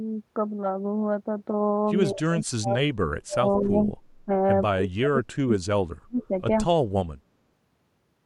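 Speech drops by up to roughly 40 dB and breaks up at 2.11–3.95 s, 4.12–4.3 s and 4.72–6.32 s, likely speech suppressed in double talk by an echo canceller.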